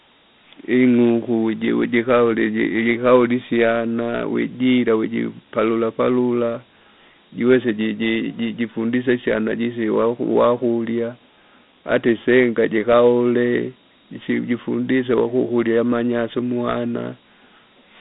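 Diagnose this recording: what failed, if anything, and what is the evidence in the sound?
Gritty hiss trails the speech throughout, nothing above 3.8 kHz: codec stage, Dialogic VOX ADPCM, coarse 4-bit steps fitting a 32 kbps stream.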